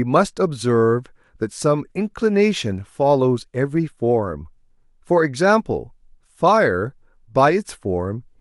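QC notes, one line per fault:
2.21 s, compressed frames skipped: the speech jumps forward by around 20 ms of audio, which points to a single compressed frame that was either missing from the file or rejected by the decoder as damaged. The audio on either side of the missing frame is joined directly, so the speech skips ahead at that point.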